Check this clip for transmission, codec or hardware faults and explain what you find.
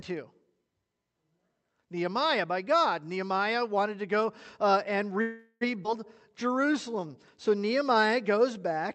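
Three transmission faults are audible, all in the last few seconds of this speech clip, on a call path whose Opus coding cuts the audio off at about 8 kHz.

Call audio freeze, 5.21 to 5.63 s, right after "to go uh and": the sound stalls, with the last sound drawn out as a fading buzz or hiss for about 0.4 s and ending in a brief silence. This is likely caused by delayed packets emptying the jitter buffer. Unlike a skip, nothing is lost and speech resumes where it stopped.

Skip ahead, 5.83 to 5.87 s, still following "to go uh and": playback jumps forward with almost no gap, dropping roughly a fifth of a second of speech and joining the two sides abruptly. This is the opposite of the freeze. Material vanishes instead of a pause being inserted.

Jitter buffer slow-down, 6.29 to 8.79 s: the buffer rebuilds its reserve by repeating single pitch periods and bits of pauses, adding 215 ms. Speech runs at 92% speed with drawn-out sounds. 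The pitch stays unchanged, which separates this from a tape-style slowdown.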